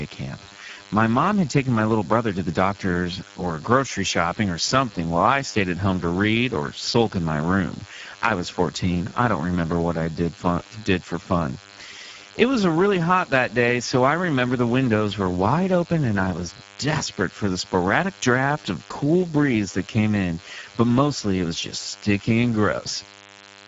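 Throughout the speech, a DECT cordless phone buzz sits about 25 dB below the signal: a thin, steady 100 Hz tone rich in harmonics, from a radio burst every 10 ms rectified by the audio circuit. The Speex codec damage is also plainly audible for the whole clip, with hoarse, noisy speech and nothing above 7.7 kHz, which fits a low-bitrate setting near 10 kbps.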